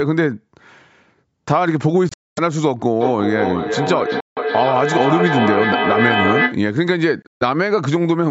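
A Bluetooth dropout at 2.09 to 2.39 s leaves the speech with holes: about 255 ms goes missing across about 280 ms, the longest gap about 230 ms. Late packets likely never reached the headphones and were discarded. The speech resumes further along, as though it had kept playing. Two shorter dropouts of about 160 ms follow at 4.20 to 4.39 s and 7.22 to 7.43 s, the latter broken into pieces with its longest silence about 140 ms.

A feedback echo between two devices runs from 3.01 to 6.66 s. A second device in the room replays this speech, its microphone sends it back, and no echo canceller covers that path. Repeats arrive roughly every 0.4 s, thinner and ringing, reaching about 1 dB below the speech, so they stack rather than fade. Throughout, the call processing leaves nothing above 8 kHz.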